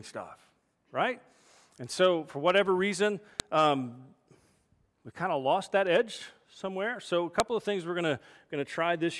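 A speech recording carrying a file header played as audio. Sharp, loud clicks land at 3.40 s and 7.40 s. Each one is very brief. They fall exactly 4.0 s apart, which matches the length of the pieces the audio was built from. Each piece kept its WAV header when the pieces were joined. Those header bytes were then read as sample values. The result is a hard snap at the start of a piece, regardless of the speech around it.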